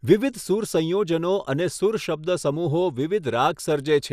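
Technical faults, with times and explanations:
Throughout: MP2 compression is the likely cause of dull, gurgling, granular speech with nothing above 15 kHz; a starved bitrate near 80 kbps shuts upper sub-bands and coarsely quantises the rest.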